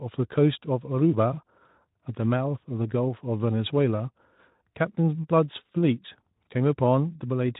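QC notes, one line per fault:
Nothing stood out on listening to this speech clip.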